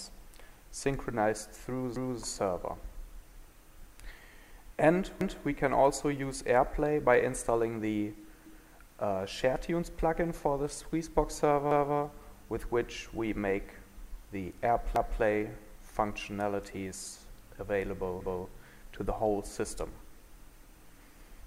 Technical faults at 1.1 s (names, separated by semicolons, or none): none